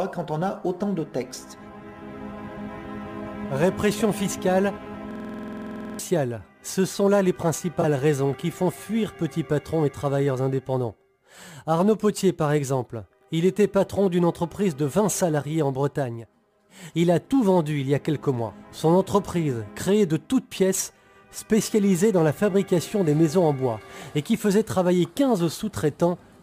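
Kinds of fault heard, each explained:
System hang loop: The computer or driver stalled while the sound hardware kept replaying its last buffer. From 5.11 to 5.99 s, one piece of audio 46.44 ms long repeats exactly, 19 times. That length fits a 2048-sample buffer. The loop repeats at 21.5 Hz. When playback resumes, about a second of audio has been skipped.
Corrupt frame concealed: Damaged bits in the compressed audio were caught by the decoder, which hid the bad data instead of playing it. From 7.81 to 7.85 s the decoder covers the damaged stretch. Its length points to two damaged frames.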